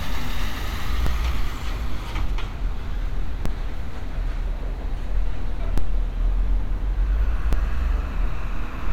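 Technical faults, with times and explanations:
1.07 s, 3.46 s, 5.78 s and 7.53 s, DC step: each is a low thump while the sound carries on unchanged. The waveform's zero line jumps by about -11 dBFS, then drains away through a 2 Hz high-pass over roughly 80 ms, so only the sudden offset is heard.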